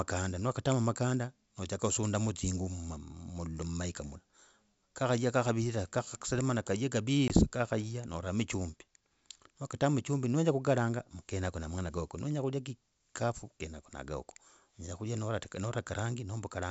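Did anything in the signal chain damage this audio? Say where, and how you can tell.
Yes. At the network stage, one packet of this 64 kbit/s G.722 call was lost at 7.28–7.31 s, after "kakhaya kakavirira kakhaserana kaye". A hard 20 ms silence results. The ADPCM decoder's predictor and step size drift from the sender's, so "kakhaya noramo chumbi" resumes slightly distorted before settling.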